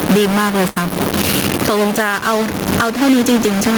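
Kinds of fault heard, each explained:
Stuck bit: A distortion rides on the speech for the whole clip, and the pauses are filled with a gritty noise instead of falling quiet. That pattern, with distortion tied to the waveform and noise appearing even at low signal, points to one converter or data bit likely held at a fixed value. Clipping, by contrast, would only crunch the loudest peaks and leave silences clean.
Gain pumping: The level is pulled down on each loud syllable and comes back up after it, with a swing of around 15 dB. Loud and soft passages sit unnaturally close in level and the speech sounds squashed. This is likely a fast limiter clamping down on input gain set far too high. Plain steady noise would stay at one level, not breathe in and out with the speech.
Burst of packet loss: From about 0.69 to 0.81 s the sound freezes into a held, fading continuation for roughly 67 ms, then jumps ahead, leaving about 60 ms of speech missing. 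The receiver stretched the last sound and faded it while packets failed to arrive, then resumed further along. A single dropout would be a brief click or gap. This one is a longer smeared hold followed by a skip.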